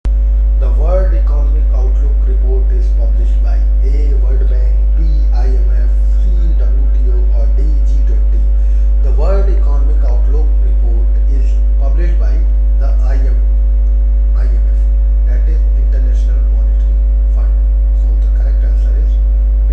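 No technical faults can be heard anywhere in the recording, and the signal stays steady and intact throughout.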